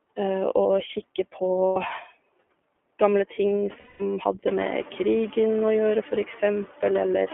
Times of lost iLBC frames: 1.67-1.77, 3.80-4.02

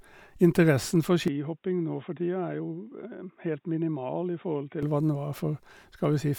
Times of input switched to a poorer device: 1.28-4.83

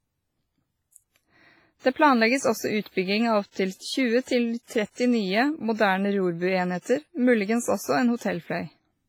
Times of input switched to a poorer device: none

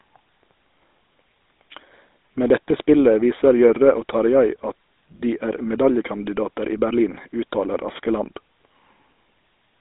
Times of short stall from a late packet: none

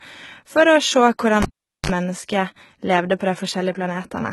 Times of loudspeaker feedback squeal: none

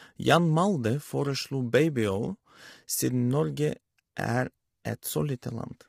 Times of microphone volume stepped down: none

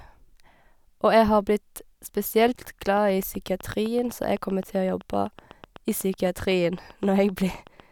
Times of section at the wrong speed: none

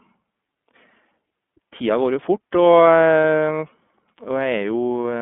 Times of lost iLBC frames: 3.21-3.24

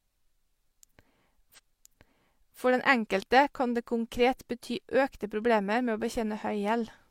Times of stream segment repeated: 1.54-2.57

